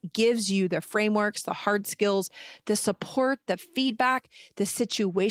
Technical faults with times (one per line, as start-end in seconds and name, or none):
none